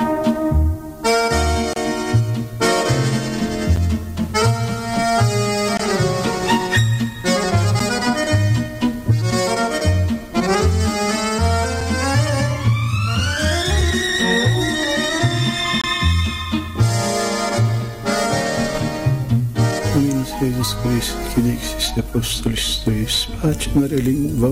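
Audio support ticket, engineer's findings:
Gap between stream segments: hard-edged silences of 3 to 28 ms at 1.73, 3.76, 5.77, 7.79, 9.80, 13.81 and 15.81 s. The 2 s spacing points to segment boundaries. Unlike a dropout, nothing is lost; the audio simply resumes slightly later.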